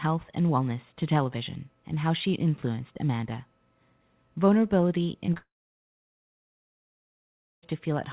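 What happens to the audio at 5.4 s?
Right around there the audio breaks up in two stages. First there's a short concealed packet loss from 5.34 to 5.38 s. Roughly 20 ms of the call didn't reach the decoder in time, so the receiver papered over the gap by stretching out the preceding sound. You hear it as a quick smear or wobble rather than a clean cut.

Straight after, from 5.38 to 7.64 s, nothing comes through at all, most likely a long network dropout. The receiver keeps extending the last sound for a moment as a fading buzz or hiss. That dies out after about a tenth of a second, leaving roughly 2.15 s of silence. At 7.64 s the speech picks up again further along, and everything said during the gap is simply missing.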